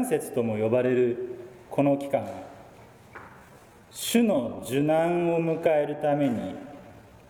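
A time-stretched section runs from 3.25 s to the end of the audio, where the pace abruptly drops to about 0.74 times normal speed while pitch holds steady, so the audio drags, likely from software lengthening the audio by repeating short pieces.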